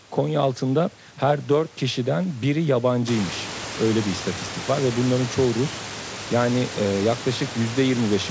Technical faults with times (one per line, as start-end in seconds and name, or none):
none